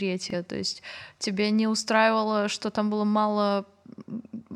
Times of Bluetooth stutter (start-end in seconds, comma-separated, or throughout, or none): 0.30-0.35